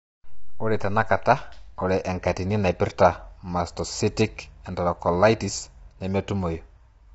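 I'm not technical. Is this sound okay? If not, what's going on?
No. The voice sounds rough and grainy from start to finish, with a hiss in the gaps between its tones and almost nothing above about 7.8 kHz, so it lacks crispness. This is plainly audible damage from low-delay AAC compression, likely the kind video-call apps use to keep conversation lag short. It works on very short slices of sound, which capture a voice's pitch poorly, and here it was squeezed too hard.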